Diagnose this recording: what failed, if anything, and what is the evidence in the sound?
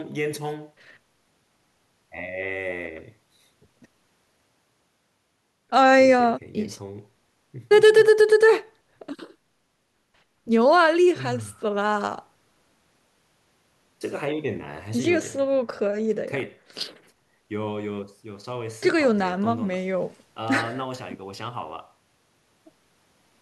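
Nothing failed here, and there is no evidence in the sound of any fault at any stage.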